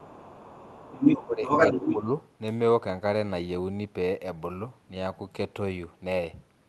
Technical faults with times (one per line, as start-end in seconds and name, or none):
0.00-1.97 other side's voice leaking through
1.23-1.43 speech suppressed in double talk
1.75-2.08 speech suppressed in double talk